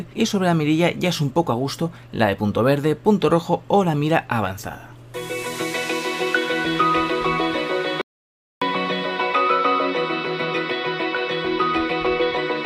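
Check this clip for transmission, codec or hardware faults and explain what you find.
One fault is present. From 8.01 to 8.62 s there is an audio dropout to silence. About 0.6 s of sound vanishes into digital silence, with no room tone. The input was likely lost while the recorder kept writing zeros. Sound cuts off abruptly, then resumes mid-flow.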